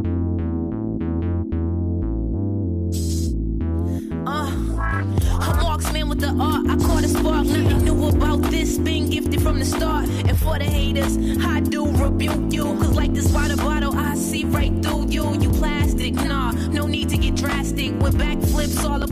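No technical faults are audible.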